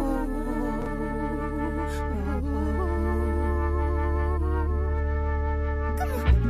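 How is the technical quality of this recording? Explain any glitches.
There is one glitch, a brief chunks-out-of-order fault between 0.82 and 0.86 s. A 20 ms chunk arrived one chunk late and played after its successor, so two slices swap places. Three hard joins produce a quick jumbled flicker. Unlike a dropout, no audio goes missing and there is no gap of silence.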